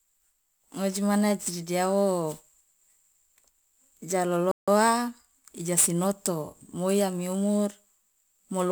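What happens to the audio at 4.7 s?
A Bluetooth stall ends right at that moment: from 4.51 s to 4.68 s the sound drops to silence for about 160 ms, then resumes. The likely cause is radio interference delaying packets on the wireless link, so the headphones' buffer emptied and playback halted until retransmitted data arrived. What you hear is a clean gap, a brief hole in the speech, with the audio picking up again just before 4.7 s.

Sample clock jitter is also present there, as it is across the whole clip. The converter's clock wanders by a few microseconds, so each sample is captured slightly off its proper instant, and the error grows wherever the waveform changes fastest. It adds a hiss-like roughness roughly 20 dB below the speech, strongest on loud and bright sounds and vanishing inside the silent gap.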